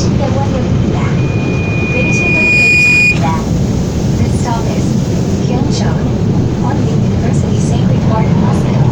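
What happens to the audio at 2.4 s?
At 2.4 s a loudspeaker feedback squeal is sounding. It runs from 1.17 s to 3.2 s. A microphone is picking up its own loudspeaker, and the loop runs away at 2.4 kHz. The tone swells over roughly a second and a half until it sits about 5 dB above the surrounding sound.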